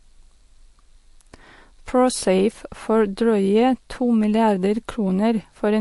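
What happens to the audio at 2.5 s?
Watery, swirly speech with nothing above 11.3 kHz, present throughout, not just at 2.5 s; likely MP3 compression at a low bitrate near 48 kbps, cutting treble and dropping weak frequency lines.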